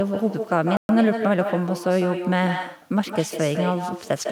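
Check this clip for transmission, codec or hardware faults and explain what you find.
Two faults are present in this speech clip: a persistent echo and one brief dropout.

Echo with no canceller, throughout: the far end's loudspeaker feeds its microphone unchecked, returning each phrase roughly 150 ms later, about 8 dB quieter and thinner.

Bluetooth stall, 0.77 to 0.89 s: audio drops to 122 ms of silence, then resumes, likely a wireless link whose buffer emptied while delayed packets were resent.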